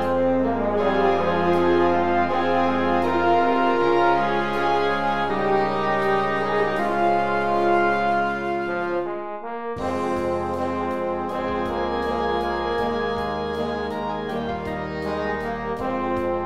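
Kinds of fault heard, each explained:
No audible technical faults turn up anywhere in the recording.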